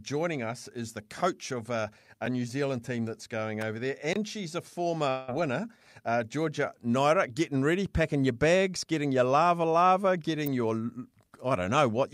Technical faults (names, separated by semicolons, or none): electrical switching spike; block of digital silence; long network dropout